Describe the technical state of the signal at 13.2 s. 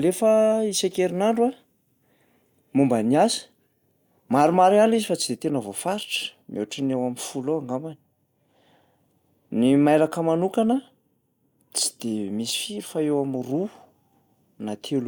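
At 13.2 s the speech signal is intact, with no technical fault present at that moment.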